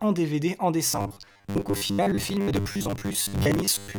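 From about 0.92 s right through to the end at 3.99 s, the speech turns into robotic sound from repeated short buffers. It's a stiff, metallic buzz sitting at about 100 Hz, still loosely tracking the talking. That's likely the playback starving for data and looping the last chunk of audio, which fits a 10 ms buffer being repeated, with most of the real audio in that stretch skipped.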